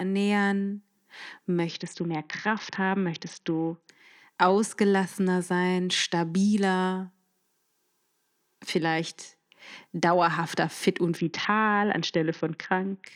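A congested Bluetooth link twice forced a Bluetooth SBC bit pool drop, at 1.69 to 3.89 s and again at 11.17 to 13.07 s, starved enough to point to a bit pool falling from around 28 to about 6, roughly 60 kbps. With so few bits, the upper sub-bands get almost nothing and the remainder is coarsely quantised, so in both stretches the speech turns dull and muffled while a gritty, grainy noise rises beneath it.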